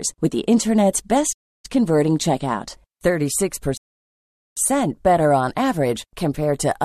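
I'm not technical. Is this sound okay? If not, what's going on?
No. The speech stops twice.

The first problem is a playback stall. Right after "with the internet's", at 1.32 s, the sound goes silent. It stays silent for about 0.31 s, until 1.65 s, then the speech carries on. It is short, but you can hear the flow break. The likely cause is that the player briefly had no audio ready to send out, or was held up by another task, so it had nothing to play.

The second problem is a rebuffering stall. At 3.77 s the speech cuts to silence again. This gap is longer, about 0.8 s, ending at 4.57 s. The speech then picks up exactly where it stopped, with "better on average". No speech is lost. The player simply ran out of downloaded audio and waited for more to arrive, which adds almost a second of dead air.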